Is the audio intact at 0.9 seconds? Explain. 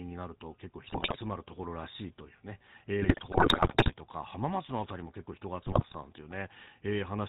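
No. From 0.86 to 1.18 s the audio carries GSM bit errors: corrupted bits in the received frames reached the decoder, throwing off its filter, pitch and gain parameters. Nearly every frame in that stretch seems damaged, so the sound breaks into squawks, pops and gargling, with abrupt jumps in spectrum and level.

Underneath that, the whole clip passes through the GSM full-rate codec. Its coarse pulse-driven vocal-tract model, which fits the 13 kbps full-rate coder, discards fine excitation detail and cuts everything above 4 kHz, so the speech at 0.9 s is also plainly buzzy and gravelly.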